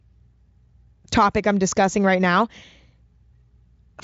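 No technical faults can be heard anywhere in this speech. It has passed through Speex at what sounds like a high quality setting, with at most faint coding damage and nothing above about 7.7 kHz.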